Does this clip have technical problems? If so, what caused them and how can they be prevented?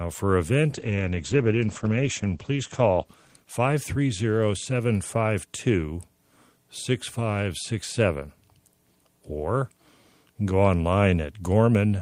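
Yes. A call bitrate drop runs from 0.69 to 4.25 s. The call's bandwidth estimate fell and the encoder was forced onto far fewer bits, which fits a fall from about 32 kbps to 11 kbps, held at its lowest for 1.49 s. The speech turns coarse and muffled as the top end shrinks from 20 kHz to 8 kHz. Setting a higher minimum bitrate and smoother congestion control would prevent this.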